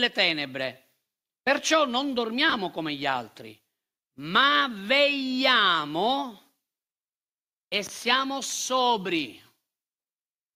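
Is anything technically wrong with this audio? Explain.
Yes. Between 2.49 and 2.54 s, after "perciò non" and before "come gli altri", the speech has frames out of order. Two adjacent short runs, which fits pairs of 20 ms blocks, play with their halves exchanged, producing a brief garbled flutter and no lost time.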